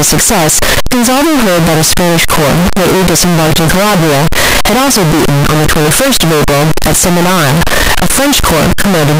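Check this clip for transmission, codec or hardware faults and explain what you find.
There's one fault here, and it runs through the whole clip: a float read as integer problem. The waveform sits nearly square at an almost fixed, high level, so the speech comes out very loud and harsh, with the background noise pushed up as loud as the talking, though you can still follow the pitch. That's likely 32-bit float samples being read as 32-bit integers, so the sign and exponent bits end up setting the level instead of the actual signal.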